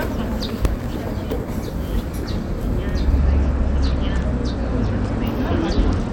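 From 0.43 to 0.86 s a gritty burst of crackle tears across the sound, then stops. This is processor overload crackle: about ten deadlines missed, each replaying a scrap of old audio with hard edges, which points to very short buffers of a millisecond or two.

From 3.18 s to the end the treble turns dull and a rough, grainy noise settles over the sound. This fits a Bluetooth SBC bit pool drop from 28 to 11, around 90 kbps, starving the upper sub-bands and coarsely quantising the rest.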